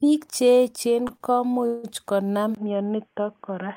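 At 1.07 to 1.11 s and 1.17 to 1.22 s come two short stalls from a late packet. The jitter buffer ran dry, so the last sound is held briefly, then resumes.

From 1.66 to 1.85 s there is a call audio freeze. For 170 ms the sound turns into a fading buzz, likely from held-up packets, then continues where it stopped.

At 2.55 s the input is likely switched to a poorer device. After a 20 ms gap, the sound turns dull and boxy to the end. Nothing above 3.4 kHz remains, a faint new noise floor sits roughly 50 dB down, and the level stays about the same.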